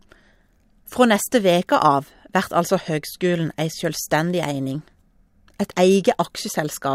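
Just after "vert altså høgskulen ei", from 4.27 s to 5.77 s, crude rate conversion roughens the speech. The audio was moved from 44.1 kHz to 48 kHz by taking the nearest existing sample. Some samples were simply repeated. No filter smoothed the result. The repeats follow a fixed pattern set by the two rates. This adds a gritty, inharmonic fizz about 30 dB below the speech. It tracks the louder and brighter sounds.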